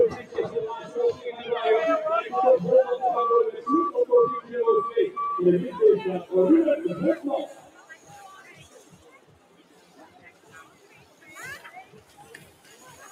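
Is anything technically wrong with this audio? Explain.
Yes. A speech-oriented noise suppressor is applied to non-speech material, treating sustained tones and ambience as noise; level swings of around 15 dB produce audible pumping and thinning.

Sound is cut by the noise suppressor at 0.22–0.37 s, 7.54–8.09 s, 8.73–11.27 s and 11.84–13.01 s, dropping by about 8 dB as steady or decaying content is misclassified and suppressed.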